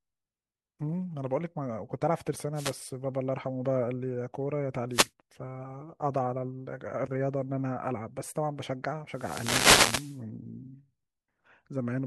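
Short swishes of static cut across the speech at 2.54 to 2.75 s and 4.90 to 5.10 s, each about 0.2 s long, and a much longer burst comes from 9.11 to 10.21 s. These are wireless microphone noise hits. The analogue FM radio link faded as reflected signals cancelled the direct one, so the receiver's own noise rose above the weakened signal. The longer fade near 9 s kept the noise up for over a second.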